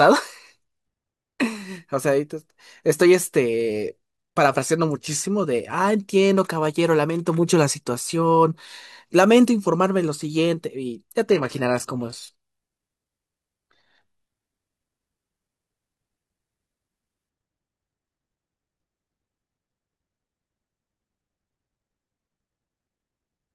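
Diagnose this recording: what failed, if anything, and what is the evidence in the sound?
At the network and streaming stage, an adaptive stream dropped to a lower bitrate from 11.29 s to 17.29 s. The speech abruptly loses its treble and takes on a synthetic, artefact-laden top end, then returns to full quality, with no gap at either switch. This fits a rendition change from roughly 96 kbit/s AAC to a 16 kbit/s HE-AAC stream.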